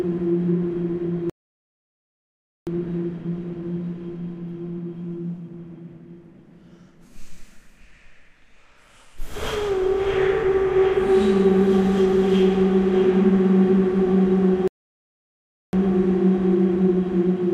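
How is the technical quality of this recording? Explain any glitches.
Two glitches stand out. The audio drops out completely at 1.30 to 2.67 s (about 1.4 s) and again at 14.68 to 15.73 s (about 1.1 s), then carries on. That's a playback stall, likely the player starving for data or its thread getting blocked.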